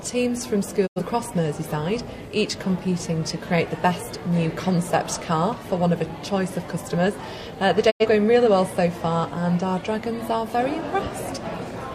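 A digital broadcast dropout occurs at 0.86 to 1.00 s and again at 7.90 to 8.06 s. Each time, the receiver stopped getting frames it could decode and muted until valid data returned. The sound fades out over about 20 ms into a short hole of silence, and everything sent during that gap is gone. Each hole lasts about 85 ms, which fits the loss of two frames, before the programme resumes.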